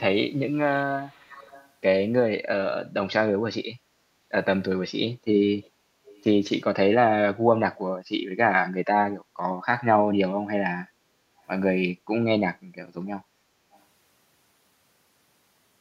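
A faint delayed copy of the speech trails the talker by about 410 ms in four places in this speech recording: a longer stretch from 0.72 to 1.69 s, then brief scraps at 5.63–5.70 s, 6.05–6.23 s and 13.72–13.80 s, each sitting well below the direct speech. This echo leak is likely a far-end loudspeaker whose echo canceller let part of the microphone pickup through and return it down the line.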